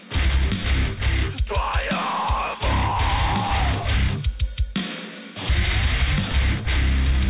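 Nothing stood out on listening to this audio.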